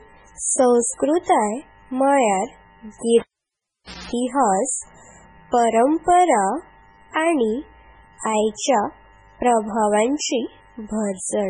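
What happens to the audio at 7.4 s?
MP3 compression is present at 7.4 s, as it is throughout the clip. The likely cause is an encoder short of bits, which fits a rate near 16 kbps. It zeroes weak frequency lines frame by frame and removes everything above 10.4 kHz. The result is heavy watery, swirly damage and smeared attacks.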